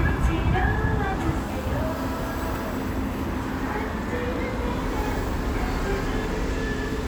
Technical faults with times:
none

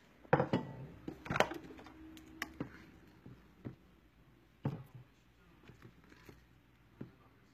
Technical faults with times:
0.00-7.54 HE-AAC compression

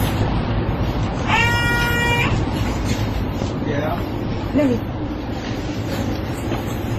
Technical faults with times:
0.00-6.99 transcoding between lossy codecs

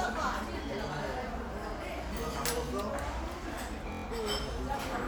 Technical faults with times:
3.92-4.04 system hang loop

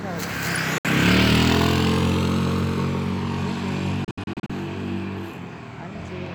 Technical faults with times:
0.78-0.85 digital broadcast dropout
4.04-4.50 digital broadcast dropout

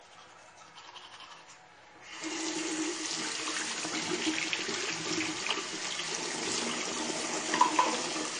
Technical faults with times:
0.00-8.39 low-bitrate audio saved at a high bitrate

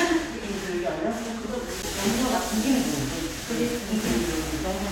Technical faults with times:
1.82 CD skip

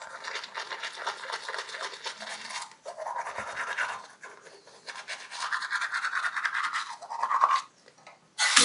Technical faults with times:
none

